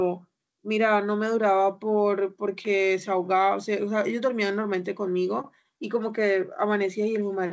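The speech comes through a call codec path with no technical faults, its content stopping at about 8 kHz in the way a G.722-style wideband call codec shapes it.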